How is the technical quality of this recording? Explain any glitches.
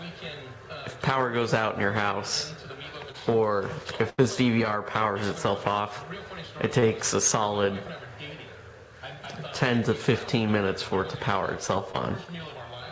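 The recording has four glitches from lost packets on a call link. The audio also stops at 8 kHz, which fits a G.722 codec at about 64 kbps.

Short concealed packet loss occurs three times, at 3.12 to 3.16 s, 6.80 to 6.84 s and 11.92 to 11.95 s. Each time about 20 ms of audio failed to arrive, so the receiver invented a stand-in by extending the preceding sound, from its pitch if voiced and as shaped noise if not, and crossfaded back. Each gap is heard as a brief smear or wobble, and a short sound there can vanish.

A burst of packet loss runs from 4.10 to 4.20 s. About 80 ms of consecutive audio went missing, and the receiver filled it by carrying the last sound forward while fading it down. It is heard as a held buzz if the sound was voiced, or a hiss dying away if not. The audio then picks up again later, with that stretch gone.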